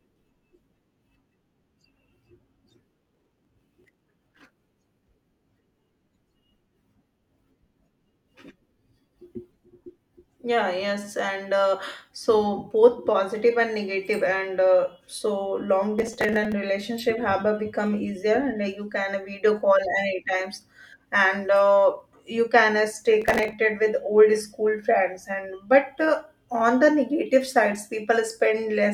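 Processor overload crackle hits at 2.91–5.07 s, 15.99–16.53 s and 23.22–23.53 s: tiny sub-millisecond buffers get skipped in runs, giving gritty, tearing crackle over the speech.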